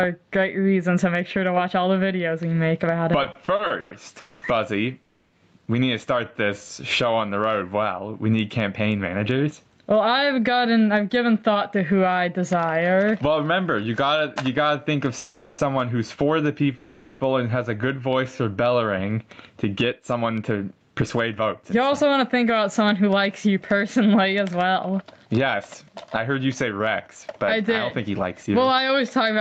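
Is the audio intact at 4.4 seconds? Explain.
No. At 4.4 s the sound is inside a call audio freeze from 4.21 to 4.44 s. The likely cause is late packets emptying the jitter buffer, so the last sound is stretched into a fading buzz or hiss for about 210 ms. Playback then resumes where it stopped with nothing lost, which is how it differs from a dropout.

That freeze sits within a jitter buffer slow-down from 3.30 to 7.28 s. Repeated pitch periods add 119 ms and run the audio at 97% speed, drawn out but at unchanged pitch. This distinguishes it from a tape-style speed error, which would also lower the pitch.

Gain pumping is present here as well, as it is throughout. The gain swings by around 20 dB, likely from a fast limiter on excessive gain, which squashes loud and soft parts closer together in level.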